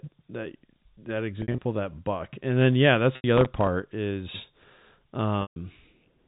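Speech on a telephone-band G.711 line, which keeps everything under 4 kHz. Packet loss with pitch repetition hits three times: scattered gaps from 1.42 to 1.58 s (100 ms missing, longest run 60 ms), then 3.16 to 3.24 s (80 ms) and 5.42 to 5.56 s (140 ms). Each gap is bridged by a looped, buzzy held tone that fades before the speech cross-fades back, consistent with lost 20 ms packets. Processor overload crackle follows from 3.38 to 3.67 s, a gritty tearing as roughly ten tiny sub-millisecond buffers miss their deadline and get filled with stale audio, leaving hard-edged clicks until the load clears.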